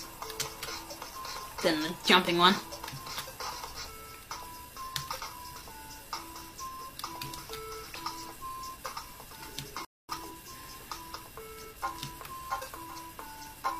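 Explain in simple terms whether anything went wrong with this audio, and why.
Something did go wrong: a rebuffering stall. At 9.85 seconds the player ran out of downloaded audio and had to wait for more. The sound drops to silence until 10.09 seconds, then picks up exactly where it stopped, adding about a quarter of a second.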